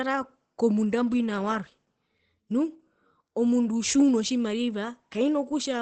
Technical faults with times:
0.00-5.82 Opus voice compression

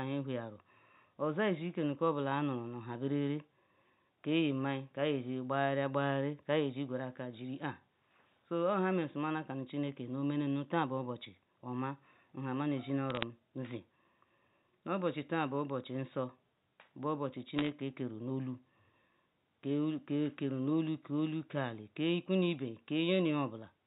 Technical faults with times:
11.25 dropped samples
13.10-13.23 bit errors on a digital phone line
17.58-17.69 bit errors on a digital phone line

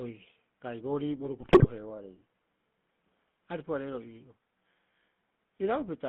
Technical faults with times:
0.00-6.09 GSM full-rate codec
1.40-1.67 GSM bit errors

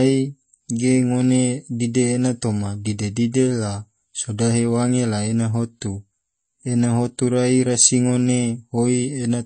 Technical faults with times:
0.00-9.45 MP3 compression

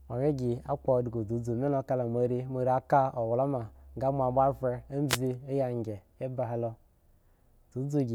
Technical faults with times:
5.08-5.18 wireless microphone noise hit

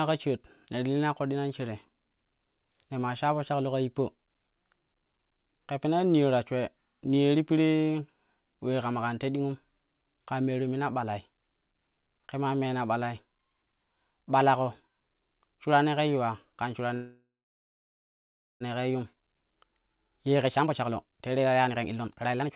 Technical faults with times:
16.94-18.63 call audio freeze
18.94-22.50 jitter buffer speed-up

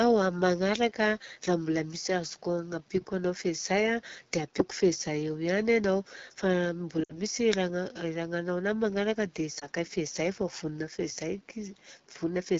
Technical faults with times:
0.00-12.59 AMR wideband (HD Voice) codec
7.03-7.19 lost AMR speech frames
9.59-9.67 lost AMR speech frames

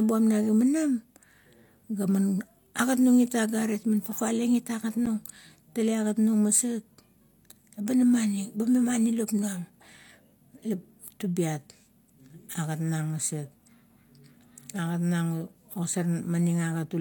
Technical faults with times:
5.06 block of digital silence

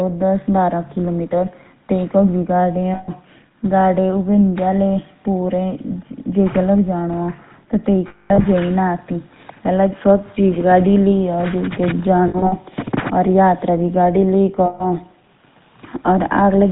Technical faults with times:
0.00-16.72 GSM full-rate codec
2.94-3.10 lost GSM frames
8.08-8.45 lost GSM frames
12.28-12.53 lost GSM frames
14.66-14.85 lost GSM frames

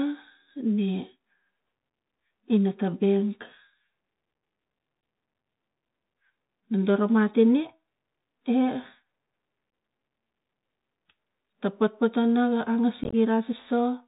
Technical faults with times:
0.00-14.07 Bluetooth CVSD headset codec
9.71 unconcealed Bluetooth headset packet loss
13.04-13.14 unconcealed Bluetooth headset packet loss

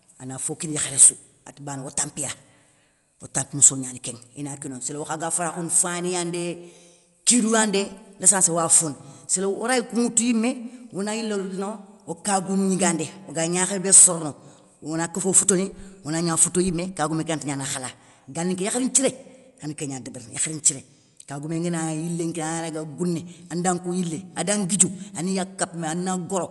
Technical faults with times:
0.00-26.50 Dolby Digital compression

